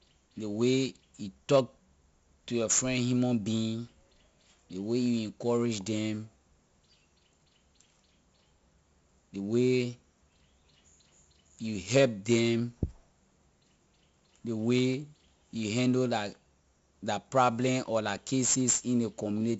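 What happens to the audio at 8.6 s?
4-bit ADPCM compression affects 8.6 s, as it does the whole speech clip. Each sample is coded as a coarse 4-bit step from a prediction, leaving a heavy gritty hiss that rides the speech level and smears consonant attacks, while nothing above about 7.7 kHz survives, which points to a 64 kbps stream.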